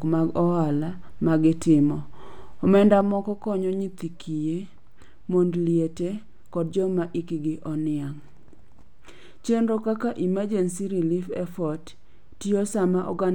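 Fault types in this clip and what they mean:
One channel drops out: at 3.01 s the speech suddenly falls by about 6 dB and stays down right to the end, with no fade or recovery. That abrupt, clean step is what you'd hear if one side of a stereo feed went dead and the remaining side got summed to mono on its own, so a lost channel is the likely cause. Anything carried only on the missing side would be gone too.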